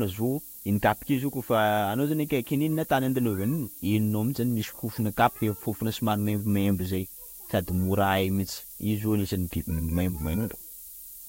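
A speech recording carrying low bit depth with noise shaping for its whole length: quantised to just 7 bits, with the rounding error pushed upward, so a thin hiss sits only about 15 dB below the voice and climbs toward the top of the band. A spectrogram shows a constant noise floor brightening steadily into the highest frequencies.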